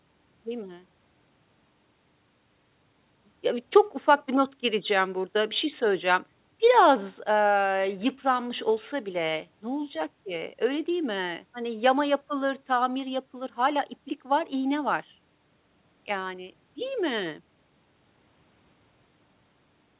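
No technical faults can be heard in this speech; the top end stops at about 4 kHz, as expected for audio that has passed through a G.711 call path.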